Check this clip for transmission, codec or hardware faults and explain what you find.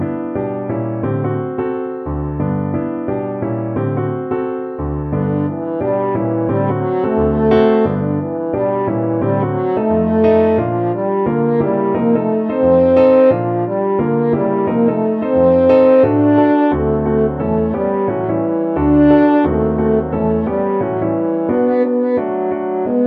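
No transmission, codec or hardware faults turn up anywhere in this clip.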